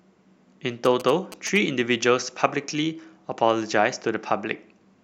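From 0.85 to 1.58 s, GSM signalling bursts cut in under the speech: a galloping dit-dit-dit of short buzzes, roughly 15 dB below the speech. A nearby 2G phone exchanging control bursts radiates RF that the audio circuitry rectifies into a buzz at about 217 Hz. On a waveform it appears as clusters of sharp spikes; a spectrogram shows evenly spaced vertical striations, with energy at 217 Hz and its harmonics.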